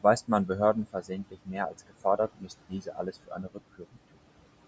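Noise suppressor artifacts run through the whole clip. The room noise sits about 17 dB below the speech, and the suppressor pulls it down by about 18 dB. It works frame by frame, band by band. So the background drops away in the gaps and comes back under the speech.

Speech cut by the noise suppressor shows up four times. The suppressor mistakes parts of the speech for noise and turns them down with the background. From 0.47 to 1.11 s, about a fifth of a second is hit, dropping by up to about 15 dB. From 1.31 to 2.5 s, about 0.4 s is lost, at up to about 18 dB. From 2.69 to 3.59 s, about half a second is hit, again at up to about 18 dB. From 3.78 to 3.98 s, a short stretch falls by up to about 16 dB. Soft consonants and word endings sound swallowed or faint.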